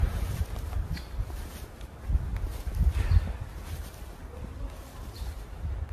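A recording of sounds with generation loss from start to finish. It sounds swirly, smeared and hollow, and attacks are blurred. Nothing is heard above 14 kHz. The likely cause is about seven passes through an AAC-LC codec at a rate that fits 64 kbit/s, each adding fresh quantisation noise.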